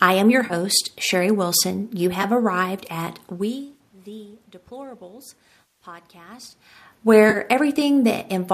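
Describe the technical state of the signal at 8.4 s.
At 8.4 s the speech signal is intact, with only the room's own background noise present and no technical fault.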